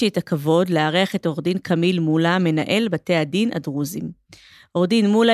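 Nothing stood out on listening to this speech recording.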